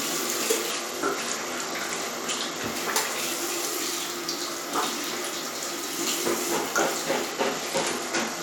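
From 0.71 to 2.66 s, and again from 7.31 s to the end, a Bluetooth SBC bit pool drop dulls the treble and adds gritty noise. The drop in quality fits a bit pool cut from 31 to 13, near 94 kbps.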